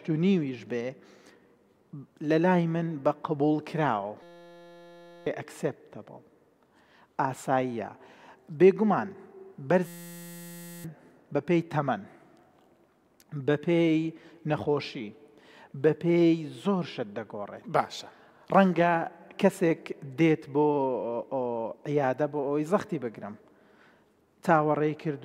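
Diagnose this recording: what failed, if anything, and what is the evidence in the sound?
A system hang loop struck twice, at the driver or buffer stage. From 4.23 to 5.27 s and again from 9.87 to 10.84 s, the sound turns into a steady buzz at 172 Hz. Each time, one 5.8 ms fragment repeats exactly, which fits a 256-sample buffer. The driver stalled while the hardware kept replaying the same ring buffer. About a second of real audio is lost in each event.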